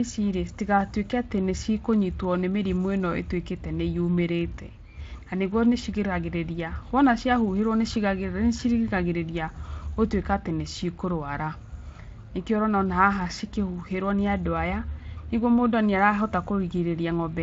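No technical faults can be heard in this speech, which carries the light coloration of a Speex-coded path with its band ending around 7.6 kHz.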